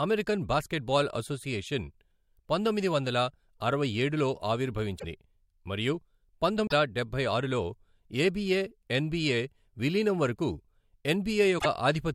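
Broken MP3 bit reservoir at 4.98, 6.66 (just before "డబ్బై ఆరులో") and 11.58 s: the speech jumps ahead, then garbles into a 60 to 80 ms chirp, burst of noise or short hole. Likely, frames of about 24 ms were lost and later frames decoded borrowed bits from the wrong frame.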